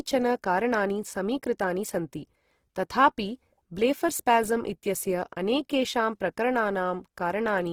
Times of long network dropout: none

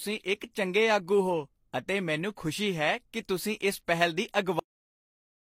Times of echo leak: none

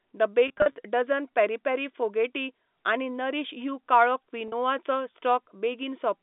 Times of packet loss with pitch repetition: 0.48-0.76, 4.48-4.52

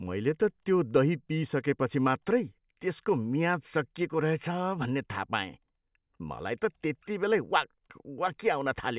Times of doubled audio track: none

